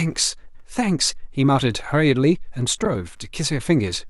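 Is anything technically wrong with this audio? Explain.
Yes, two faults. Computer activity noise runs throughout: a faint buzz pulsing roughly a hundred times per second, well below the speech. The computer's shifting load disturbs the audio ground, which shows as evenly spaced vertical ticks on a spectrogram. Frames out of order occur at 0.47–0.65 s and 2.84–2.95 s, where neighbouring blocks were decoded swapped. Each stretch sounds like a garbled flutter.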